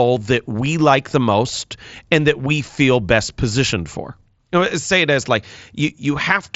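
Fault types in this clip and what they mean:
No fault types are present in this clip, so there are none to explain.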